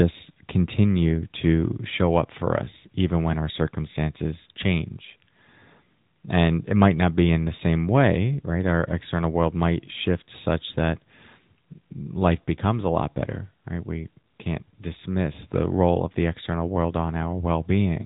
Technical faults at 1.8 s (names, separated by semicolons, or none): AMR narrowband mobile codec